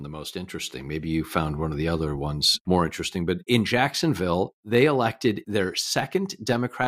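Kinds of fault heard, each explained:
No audible faults of any kind appear here.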